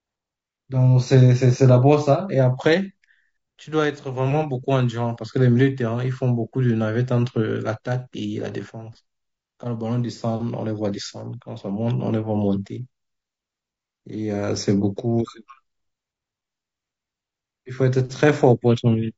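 Speech that sounds rough and grainy throughout, with noise between harmonics and a thin top band, likely from low-delay AAC compression at a low bitrate, around 32 kbps.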